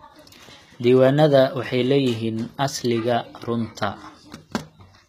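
From start to finish the speech carries plainly audible coding damage, most likely HE-AAC compression at a low rate, around 20 kbps. Only the lower band is truly coded; the treble is rebuilt by copying lower content upward, so its harmonics fail to line up and s sounds turn gritty and lispy. A spectrogram would show blocky, repeated-looking texture in the upper band and nothing at all above 14.9 kHz.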